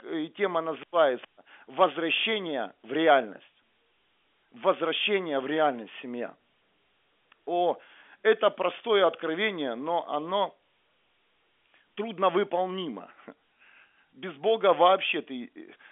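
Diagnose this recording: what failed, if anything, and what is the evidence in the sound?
Nothing failed: the speech runs through the telephone chain with no dropout, glitch or distortion, and the band sits at roughly 250 Hz to 3.4 kHz with nothing above 3.6 kHz, which is just what G.711 telephone coding at the narrowband line rate is expected to leave.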